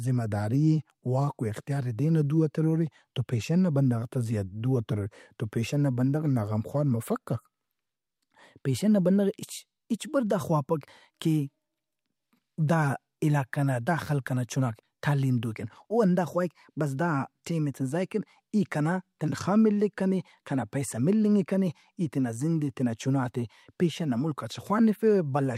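No technical faults are audible anywhere in this speech recording.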